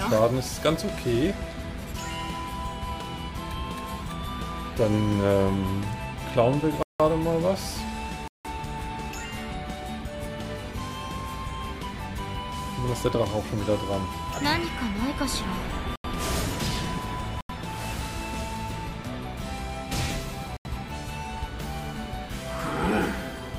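Blocks of digital silence cut the sound at 6.83 and 8.28 s (171 ms each) and at 15.96, 17.41 and 20.57 s (85 ms each). These are unfilled output buffers, which fits 8192- and 4096-sample blocks. Each is a short hole.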